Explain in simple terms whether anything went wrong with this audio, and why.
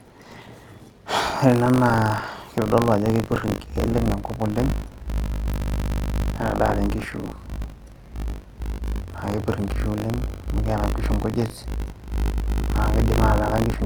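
Buffer tearing: the software and sound hardware slipped out of step, so bits of older audio replay, giving the speech a 50 Hz robotic buzz throughout.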